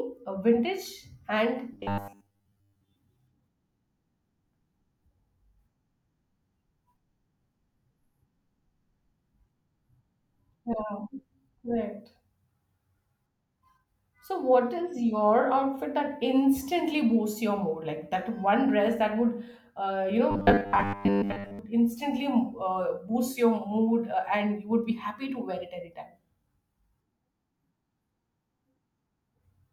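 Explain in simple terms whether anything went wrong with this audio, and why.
From 1.73 to 2.96 s, and again from 20.31 to 21.59 s just after "uh you", the speech turns into a stiff, metallic 100 Hz buzz that only loosely follows the words. This is robotic sound from repeated short buffers. Audio likely arrived too slowly, so a 10 ms slice was replayed over and over while most of the real sound was skipped.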